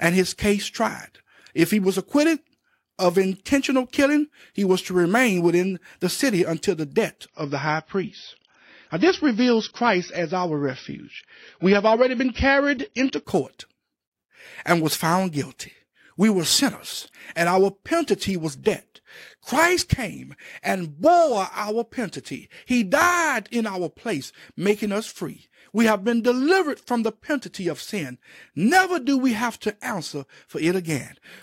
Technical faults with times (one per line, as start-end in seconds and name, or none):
7.26-13.26 adaptive stream at a lower bitrate
18.44-19.52 filter restarted on every block